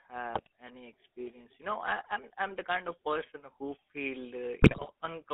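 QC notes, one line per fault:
Throughout: GSM full-rate codec. The speech has that buzzy, gravelly roughness you get when the vocal tract is modelled and driven by a thinned-out pulse train. Only every third excitation sample survives, so the fine detail of the voice turns into grit. The band sits roughly between 200 Hz and 3.5 kHz, so there's no air on top and not much body underneath. The damage is plainly audible, and the rate points to the 13 kbps full-rate mode.
0.33 to 0.47 s and 4.60 to 4.90 s: GSM bit errors. Just before "any experience" there's a short burst of squawky, gargled breakup, where corrupted filter, pitch and gain values knock the spectrum sideways for a few frames. The second hit comes right after "of person who feel". It's longer and rougher, with pops and level jumps. That fits a noticeably higher error rate on a weak link, and a larger run of frames takes the damage.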